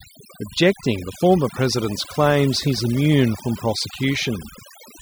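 Overdone noise removal runs throughout, cutting frequency bands near the noise estimate, so the background drops to twinkling near-silence.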